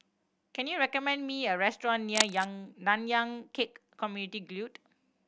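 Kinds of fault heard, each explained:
Cable scratch noise: from 2.14 to 2.46 s a dense, ragged burst of scratching and rustling sits over the speech at roughly the same level as the voice, likely from a worn cable or connector being moved so its contact resistance fluctuated rapidly.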